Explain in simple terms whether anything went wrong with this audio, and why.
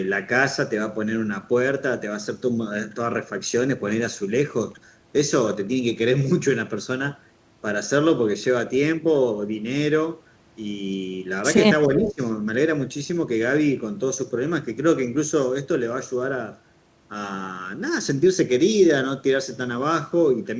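Around 11.87 to 12.21 s, both ends of the call were likely talking at once, and the echo canceller, unable to tell the local talker from the loudspeaker's echo, turned everything down. This speech suppressed in double talk makes the voice dip sharply and break up for about a third of a second.

Inside that same stretch, from 12.05 to 12.13 s, a brief echo leak can be heard. The far side's echo canceller likely missed a scrap of its loudspeaker sound, so a faint copy of the voice returns, delayed by about 0.38 s.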